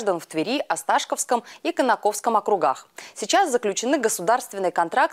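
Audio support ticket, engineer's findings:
No faults heard on this one, nothing in the audio that points to a problem anywhere along the chain.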